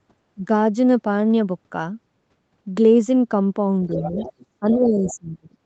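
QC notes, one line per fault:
0.35–0.47 s and 4.6–5.55 s, speech suppressed in double talk: the talker's level dips sharply, by about 15 dB in the brief first instance and about 25 dB in the later one, which spans roughly a second. The likely cause is the echo canceller failing to separate near-end speech from loudspeaker echo while both sides spoke and attenuating everything, so the voice sinks and thins rather than fading naturally.
3.92–4.46 s, 4.71–4.78 s and 5.06–5.14 s, other side's voice leaking through: a second voice sits underneath, about 15 dB below the talker in the first two spots and about 20 dB below in the last. It is likely residual loudspeaker echo that the canceller did not fully remove from the microphone signal. The two short scraps fall inside the suppressed stretch and surface as brief fragments.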